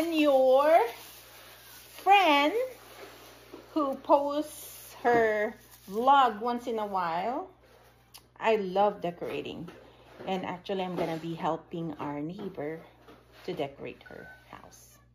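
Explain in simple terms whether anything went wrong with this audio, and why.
A steady low hum runs underneath the sound from the very start to the very end, a constant drone that never changes pitch and sits at 60 Hz, the frequency of the electricity supply in many countries. This is mains hum. The power line leaked into the recording, most often through a ground loop between connected equipment or from a nearby transformer, and the recorder captured that electrical buzz along with everything else.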